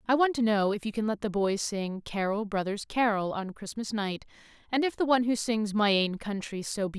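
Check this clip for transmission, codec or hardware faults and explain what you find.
No faults detected.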